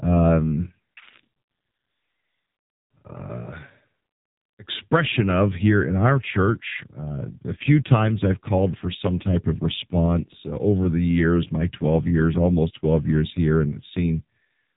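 AMR narrowband mobile codec damage runs throughout the speech, with nothing above 3.8 kHz surviving. The codec rebuilds each 20 ms frame from a vocal-tract model and a few pulses, and the heavy buzzy, synthetic texture points to one of its lowest bitrates, around 5.9 kbps.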